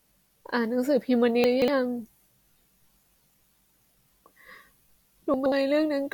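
Chunks out of order at 1.44 to 1.68 s and 5.34 to 5.52 s: a 60 ms slice of the speech arrives late and plays three chunks behind, then two, so the audio jumbles briefly at the hard joins.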